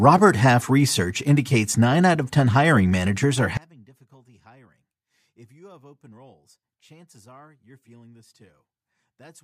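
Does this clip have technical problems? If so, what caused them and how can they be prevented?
Yes. From 3.57 s to the end the speech drops about 32 dB to a faint trace, likely one channel inverted cancelling the centred voice in mono. Check channel polarity before any mono fold-down.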